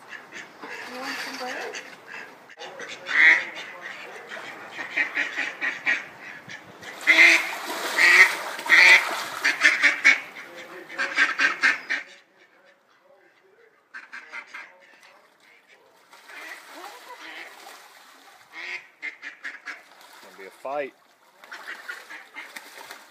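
No technical faults can be heard anywhere here.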